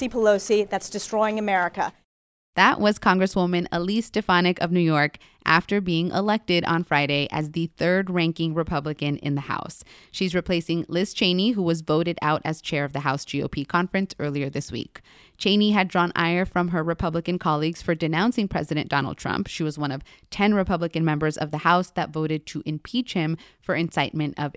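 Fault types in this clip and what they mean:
No faults found in this speech recording.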